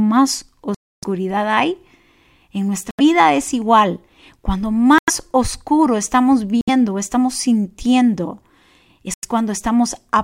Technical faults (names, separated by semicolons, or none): Bluetooth stall